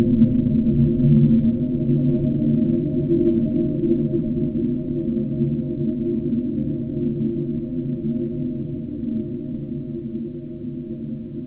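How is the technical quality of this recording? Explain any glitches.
No glitches are audible; the recording holds steady throughout.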